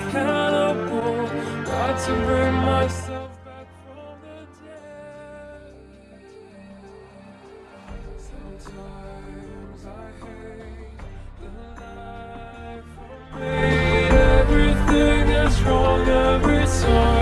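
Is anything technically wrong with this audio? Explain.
Yes. There is zipper noise from 2.79 to 3.39 s and again from 13.28 to 13.65 s. In both places the level is moved in coarse 3 dB jumps with no smoothing between them, so each jump leaves a small click. The first is a drop of roughly 20 dB at around ten steps a second, heard as a ticking. The second is a rise of roughly 20 dB at around twenty steps a second, which sounds like a faster zipping.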